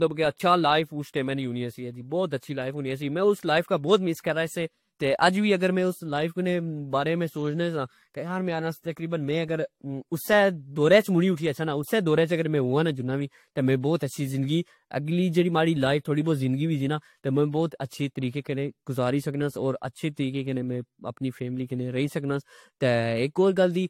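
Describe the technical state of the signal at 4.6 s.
At 4.6 s the speech carries generation loss, and it runs through the whole clip rather than this moment alone. Nothing is present above 16.6 kHz. The sound is swirly and hollow, with smeared consonant attacks. That points to audio that was likely decoded and re-encoded about three times through a lossy codec. The character fits AAC-LC at 64 kbit/s. Each pass quantised on a shifted frame grid, so the noise piled up.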